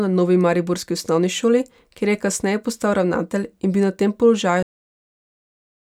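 At 4.63 s the speech stops abruptly in the middle of a sound: a cut-off end. The final stretch of audio was never written or played out, so the signal falls straight to digital silence with no decay or room tail, and that silence runs for the remaining 1.4 s. Unlike a dropout, the sound never returns afterward, and unlike a fade-out, there is no gradual drop in level before it stops.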